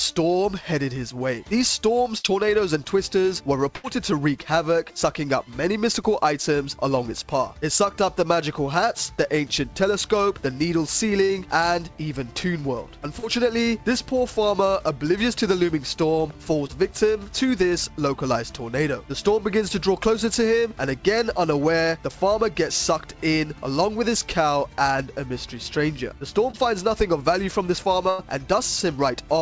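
At 2.18 to 2.26 s and again at 3.76 to 3.86 s, a burst of packet loss leaves holes of 60 and 80 ms. The receiver stretches the last sound and turns it down as it goes, so a held buzz or fading hiss covers the gap before the audio resumes with that stretch missing.

Between 11.26 and 26.55 s come four cases of short concealed packet loss, at 11.26 to 11.31 s, 13.19 to 13.25 s, 16.67 to 16.71 s and 26.51 to 26.55 s, each losing 20 to 40 ms. The decoder patches each hole from the preceding sound and blends back, giving a quick smear or wobble where a short sound can drop out.

A final, longer burst of packet loss at 28.09 to 28.21 s removes 100 ms. It is concealed the same way for over 90 ms, with a fading continuation before the audio picks up further on. Throughout, the sound carries nothing above 8 kHz, which fits the G.722 call codec at 64 kbps.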